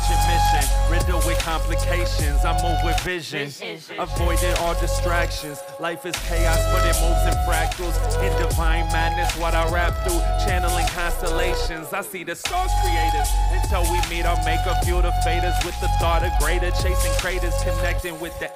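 From 12.50 to 13.70 s, channel delay causes comb filtering. One channel lags the other by roughly 3 ms, and summing them cancels evenly spaced frequencies from around 200 Hz upward, so the sound turns hollow and phasey. A spectrogram shows fixed horizontal notch stripes.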